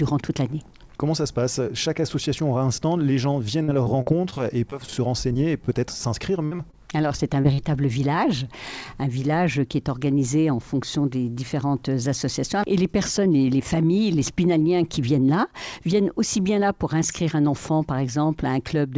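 From 3.64 to 5.69 s and again from 6.45 to 7.60 s, repeated packet loss (robotic sound): a quick run of holes up to 46 and 58 ms, each patched by stretching the last sound. The result is choppy, with pieces missing, rather than a single clean dropout.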